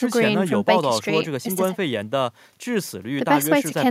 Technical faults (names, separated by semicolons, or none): none